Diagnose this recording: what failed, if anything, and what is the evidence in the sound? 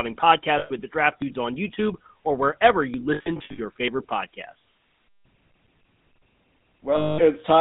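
The speech has passed through the GSM full-rate codec at 13 kbps, a codec-stage fault. The band runs only from 150 Hz to 3.6 kHz, and the voice has a buzzy, gravelly roughness. A plain band-limit would sound muffled, but this roughness comes from the coarse pulse excitation.

Lost GSM frames are a network fault. They occur at 0.58 to 0.71 s (six frames, 120 ms, just before "with the draft"), then scattered from 3.14 to 3.6 s (240 ms lost within 440 ms, longest run about 70 ms), and at 6.96 to 7.20 s (220 ms). Each gap is filled by the last good frame repeated as a metallic ring, so it does not drop to silence.

A dropped buffer (overrun) is likely at 1.22 s, just after "with the draft". There is a small jump forward, with something like 20 ms of sound gone and both sides butted together. Unlike the frame losses, there is no ringing fill and no gap, only the skip.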